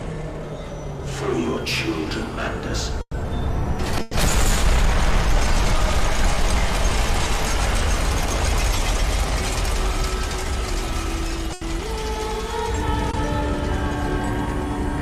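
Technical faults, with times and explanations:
3.01–3.15 s, 4.01–4.13 s and 11.53–11.63 s: burst of packet loss. Runs of audio, about 120 ms, 100 ms and 80 ms long, failed to arrive in time to be played. The receiver stretched the last sound it had across each gap and turned it down, so each gap is a held, fading tail. At 3.01 s the fill dies away into about 50 ms of silence. Playback then resumes further on, with those stretches of the original audio missing.
13.11–13.15 s: short concealed packet loss. About 20 ms of audio missed the decoder. The receiver covered the hole by extending the preceding sound, carrying its pitch forward if it was tonal or continuing it as shaped noise if not, then crossfaded back into the real signal. The result is a brief smear or wobble rather than a gap, and a very short sound at that point may be lost.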